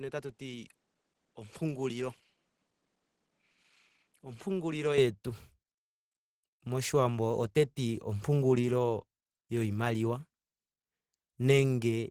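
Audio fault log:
throughout: Opus compression. The speech is grainy, hoarse and rough across the whole clip, with the plainly audible damage of a codec short of bits. Instead of leaving spectral holes, the encoder fills starved bands with folded copies of lower ones or with noise, so the sound turns gritty rather than swirly. The hoarse texture points to the hybrid speech mode, which fits a low bitrate around 16 kbps. The band still reaches about 20.4 kHz.
0.00–4.98 s: input switched to a poorer device. For the opening stretch the sound is duller and a little boxy, with nothing above 11.4 kHz. It sits about 5 dB quieter and carries its own faint background noise, roughly 45 dB below the speech. At 4.98 s the top end and level return with no gap in between, most likely because the recording moved from a weaker microphone or headset call profile to the main input.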